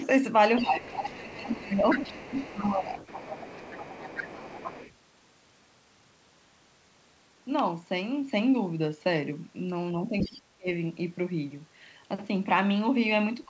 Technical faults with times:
0.00-0.06 other side's voice leaking through
0.58-1.61 other side's voice leaking through
0.62-2.92 speech suppressed in double talk
1.89-4.94 other side's voice leaking through
10.07-10.68 speech suppressed in double talk
10.18-10.41 other side's voice leaking through

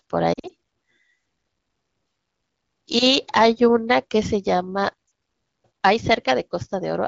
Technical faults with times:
0.33-0.51 lost AMR speech frames
5.07-5.11 lost AMR speech frames

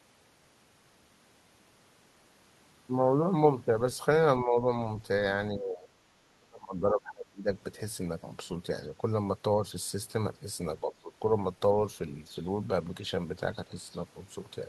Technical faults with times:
4.43-4.67 speech suppressed in double talk
5.51-5.90 speech suppressed in double talk
6.39-7.51 speech suppressed in double talk
10.81-11.14 speech suppressed in double talk

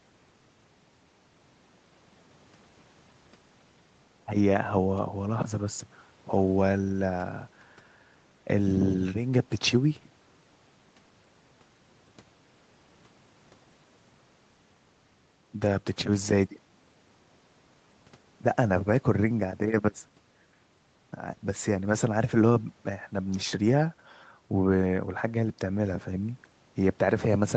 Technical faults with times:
none

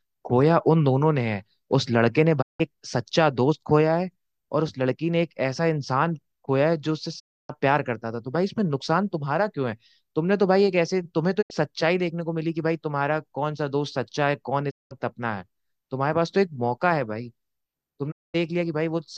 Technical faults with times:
2.41-2.61 digital broadcast dropout
7.18-7.51 digital broadcast dropout
11.41-11.52 digital broadcast dropout
14.69-14.93 digital broadcast dropout
18.10-18.36 digital broadcast dropout

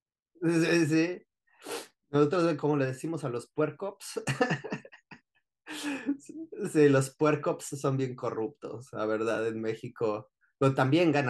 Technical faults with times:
none

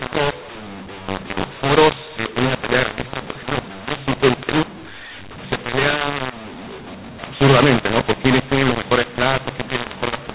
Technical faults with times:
0.00-10.34 mu-law and A-law mixed up

